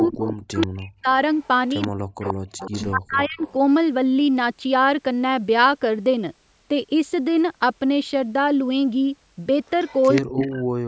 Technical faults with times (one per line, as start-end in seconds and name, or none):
0.00-0.67 echo leak
0.09-1.08 speech suppressed in double talk
1.41-2.85 echo leak
1.89-3.41 speech suppressed in double talk
3.39-3.52 echo leak
9.66-10.42 echo leak
10.23-10.88 speech suppressed in double talk